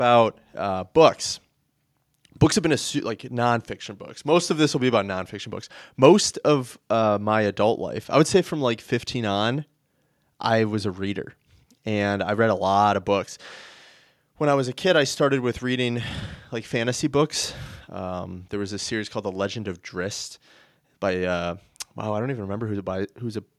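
No technical faults occur at any point in the recording.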